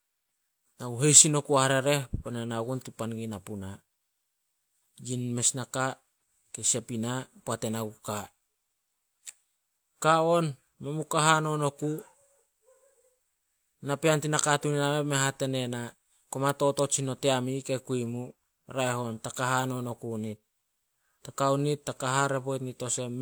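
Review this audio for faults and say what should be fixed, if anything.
No faults; nothing to fix.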